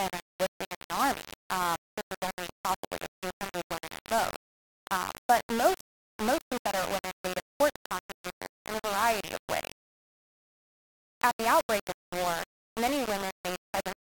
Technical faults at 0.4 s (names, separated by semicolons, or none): low bit depth without dither